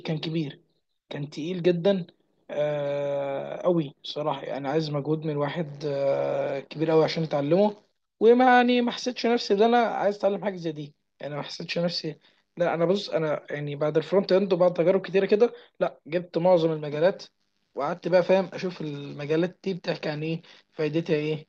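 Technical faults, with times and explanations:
No technical faults are present in the speech recording.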